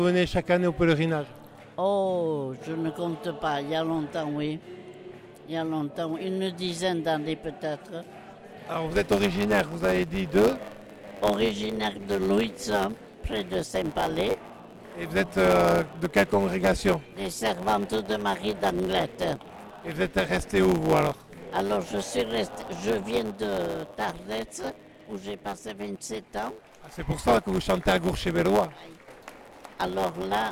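From 8.90 s to the end, a block size mismatch (truncated) sets in. The tail of each block, which fits a 512-sample size, is discarded, giving a 100 Hz buzz and playback about 1.07 times faster at normal pitch. The waveform shows a step every 10 ms, and the spectrogram shows lines at 100 Hz multiples.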